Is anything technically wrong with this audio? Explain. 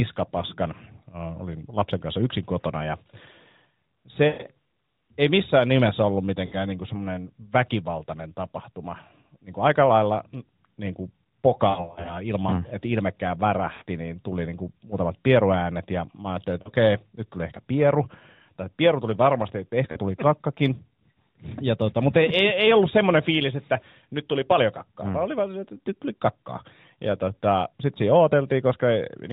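Yes. Lost AMR speech frames occur at 4.28–4.49 s, 6.46–6.56 s, 11.70–12.19 s, 13.74–13.84 s, 16.62–16.72 s and 19.92–19.99 s. Radio errors corrupted frames, so the decoder replayed its last good pitch and vocal-tract settings at falling gain. The result is brief dips and warbles in the narrowband speech, drawn out and fading where the longest run reaches 120 ms near 4.3 s.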